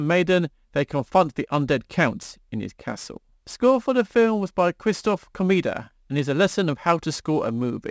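Aliasing runs through the whole clip. The speech was dropped to a lower rate, which fits 16 kHz, without filtering first, so everything above 8 kHz folds back as unrelated tones roughly 30 dB below the speech, leaving sibilants gritty and faintly metallic.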